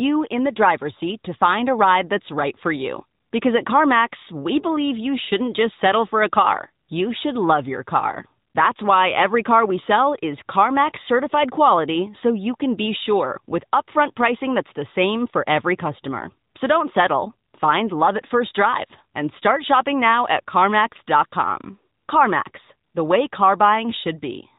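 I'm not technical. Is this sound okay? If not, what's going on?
No. The whole clip has passed through the AMR narrowband mobile codec, the old phone-call compression. Everything above about 4 kHz is gone, and the speech sounds buzzy and synthetic. Simple muffling would only sound dull, but this rebuilds the voice and adds that artificial edge.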